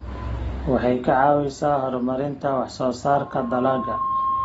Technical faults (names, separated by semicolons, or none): AAC compression; loudspeaker feedback squeal